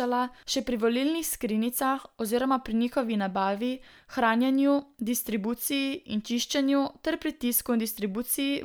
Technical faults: none

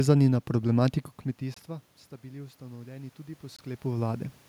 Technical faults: gap between chunks; automatic gain rising

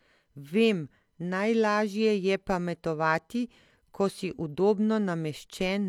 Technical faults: none

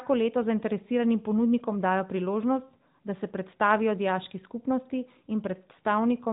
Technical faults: none

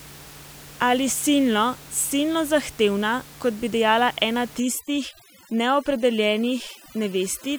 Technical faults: overdone noise removal

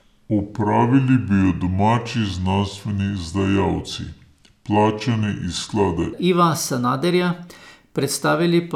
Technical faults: section at the wrong speed

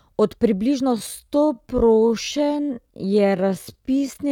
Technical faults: time-stretched section

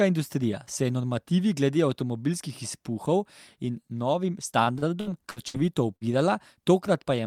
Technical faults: repeated packet loss (robotic sound); burst of packet loss

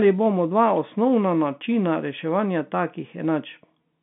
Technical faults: none

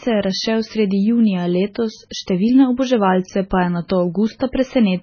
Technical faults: MP3 compression; pre-echo

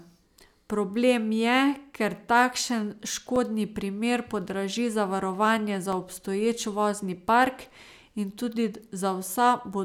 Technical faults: block of digital silence

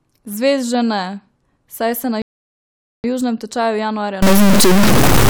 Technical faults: rebuffering stall; stuck bit

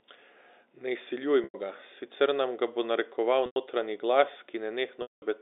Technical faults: packet loss with pitch repetition

